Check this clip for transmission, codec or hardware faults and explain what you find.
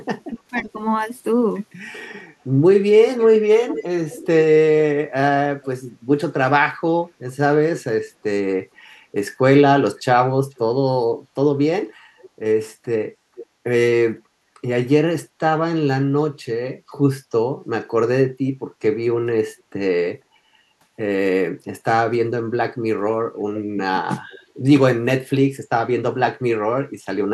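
The clip shows three echo-canceller faults on what is likely a loudspeaker call: double-talk suppression, repeated echo leak, and gating of the background.

Speech suppressed in double talk, 0.3 to 0.7 s: the echo canceller, likely confused by both sides talking at once, pulls the speech down by about 20 dB in brief dips.

Echo leak at 0.57 to 0.62, 3.18 to 7.83, 10.0 to 10.58, 12.21 to 13.46 and 24.3 to 24.39 s: the far end's canceller likely failed to remove its loudspeaker pickup. A faint copy of the speech returns 475 to 497 ms later, about 15 to 35 dB below it, and is longest around 3 to 8 s.

Background gated by the echo canceller at 11.96 to 12.09 and 14.26 to 14.44 s: the canceller clamps the microphone while the loudspeaker plays. The room sound drops by about 14 dB and then 11 dB before recovering.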